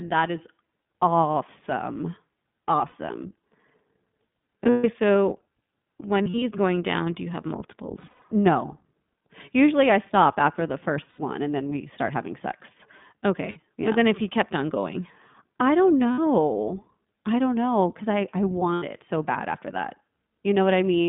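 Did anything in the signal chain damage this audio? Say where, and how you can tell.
Yes. The audio sounds boxy, rough and slightly synthetic, confined to about 150 Hz to 3.6 kHz. That points to the codec stage: iLBC at 15.2 kbps with 20 ms frames.

Short held-vowel fills, slightly buzzy or breathy, appear at 2.88, 4.64, 6.22, 8.00 (after "down do you have"), 11.10, 13.50, 16.12 (after "on going I don't") and 18.74 s (after "know because I I"). These are lost iLBC frames on the network. The decoder repeats the last pitch cycle mixed with noise, then recovers at once.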